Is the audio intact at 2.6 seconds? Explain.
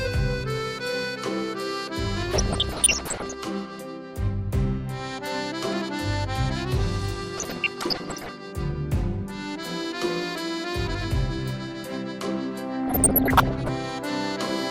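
No. At 2.6 seconds the audio is inside a stretch of DAB burbling that runs from 2.33 to 3.34 s. Bit errors slip past the error correction and corrupt the MP2 data. Bad samples put short blips of noise in single sub-bands, and bad scale factors make sub-bands jump in level for up to a frame. The damage is dense, which fits a bit error rate of a percent or two. It sounds like bubbling mud, with chirps and squelches laid over the sound.

Underneath that, the whole clip carries MP2 compression artefacts, likely from Layer II encoding at a low rate. They are plainly audible. The amount of damage fits a rate of around 80 kbps. The encoder splits the sound into 32 sub-bands and hands out too few bits, so upper bands drop out and flicker. The bands that remain are coarsely quantised. The result is dull, with a gurgling, granular edge.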